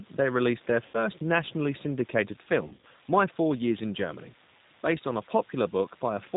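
Throughout, the speech sounds rough, slightly synthetic and dull, with nothing above 4 kHz. This is the G.729 codec at 8 kbit/s rebuilding the speech from a simplified model.

From 0.86 to 0.98 s, and again from 2.67 to 2.86 s, the speech stretches and fades, and recovers weakly. This is VoIP packet loss concealed by the speech codec. It covers 80 ms of lost audio first, then 100 ms scattered across 160 ms.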